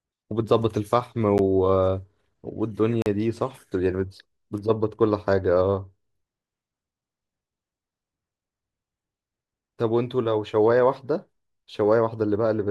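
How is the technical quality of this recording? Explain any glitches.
Two blocks of digital silence break up the speech. At 1.38 s a 10 ms block drops to silence, and from 3.02 to 3.06 s a 40 ms block does the same. The output buffer was likely not filled in time, so zeros went out in place of audio. The signal stops and restarts with no fade. The short one sounds like a single tick and the longer one like a brief hole. Unlike a signal fading out, the sound cuts to silence instantly.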